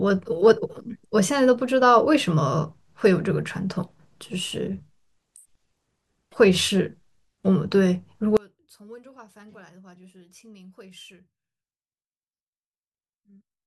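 From 8.37 s to the end, the speech falls about 28 dB, likely one channel inverted cancelling the centre in mono; waveform and spectrogram nearly vanish.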